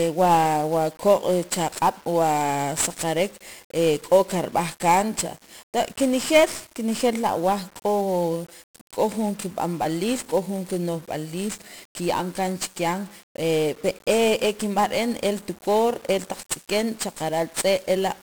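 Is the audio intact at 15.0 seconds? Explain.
No. At 15.0 s, as across the whole speech clip, 1-bit DFPWM compression is audible. Each sample is a single bit nudging an adaptive level up or down, consistent with a 48 kbps stream, and the heavy broadband quantisation noise leaves the sound fuzzy and crackly, with the treble buried in hiss.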